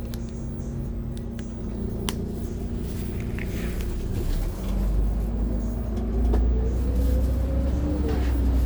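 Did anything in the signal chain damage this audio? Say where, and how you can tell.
No, nothing in the signal chain damaged this audio; there is nothing to point to at any stage.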